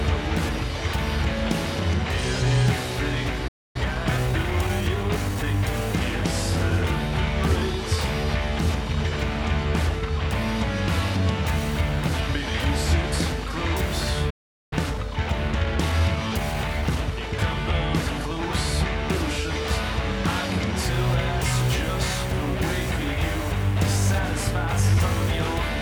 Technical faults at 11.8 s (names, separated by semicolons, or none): none